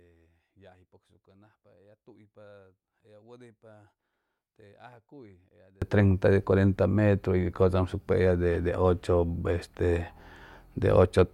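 From 0.0 to 5.82 s, summed to mono, the speech drops by about 36 dB to a faint residue, recovering just before "treinta de cuarenta". The likely cause is one channel inverted, so the centred material common to both channels cancels.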